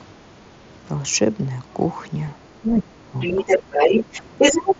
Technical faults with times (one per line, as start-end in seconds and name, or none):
2.61-3.47 speech suppressed in double talk
3.20-4.75 other side's voice leaking through